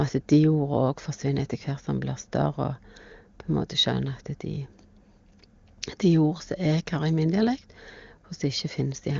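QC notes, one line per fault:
Nothing to flag here; the speech comes through an AMR wideband (HD Voice) link whose sound fits its top rate of around 23.85 kbit/s, with at most a faint trace of the codec.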